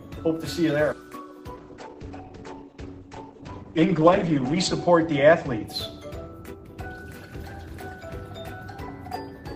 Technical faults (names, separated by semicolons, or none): call bitrate drop